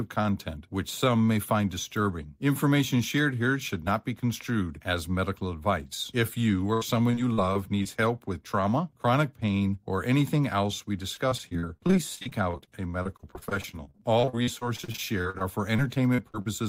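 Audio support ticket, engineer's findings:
Choppy, robotic speech, 6.73–7.87 s, just before "help with trauma chronic". A handful of short dropouts, longest 79 ms, about 180 ms missing in total, roughly 15% of the span patched over. Repeated packet loss, with concealment extending the last audio into each hole.

Same robotic chop, 11.15–16.48 s, after "or anything else we". Dozens of dropouts, none over 45 ms, about 1.06 s lost, around 19% concealed. Sustained repeated packet loss on the network or jitter-buffer path.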